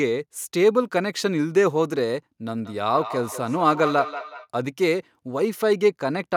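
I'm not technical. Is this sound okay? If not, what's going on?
No. From 2.44 to 4.48 s there's a feedback echo between two devices: another device in the room replays the speech, the microphone catches it again, and it comes back roughly every fifth of a second, thinner and more ringing each time.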